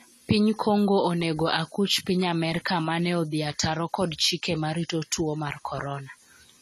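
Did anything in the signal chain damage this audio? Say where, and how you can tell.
Yes, at the codec stage, throughout the speech: nothing reaches above 14 kHz, and the dull, smeared, fizzy texture is plainly audible. This is likely AAC compression, where too few bits force a lowered cut-off and coarsely quantised spectral lines, which fits AAC-LC at about 32 kbps.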